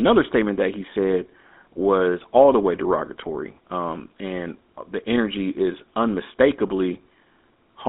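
From start to finish the speech carries GSM full-rate codec damage, plainly audible as a buzzy, gravelly roughness, which fits the 13 kbps full-rate mode. The codec models the vocal tract and excites it with sparse, regularly spaced pulses, so fine detail is lost. On a spectrogram, energy sits in a band from about 200 Hz to 3.7 kHz, with nothing above, and harmonics look smeared and grainy rather than cleanly striated.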